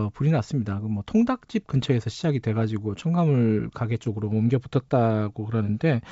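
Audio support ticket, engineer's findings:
Bit errors on an ADPCM link: pops with rough crackly bursts at 1.76–1.86 s, 4.04–4.09 s, 5.68–5.72 s. Flipped bits, at an error rate of a few tenths of a percent, throw off the decoder's step size and predictor, so each error rings on for milliseconds. Spectrogram shows broadband vertical smears. Waveform shows jagged spikes and brief level jumps. Wideband path otherwise clean up to 7 kHz, fitting G.722 at full 64 kbit/s.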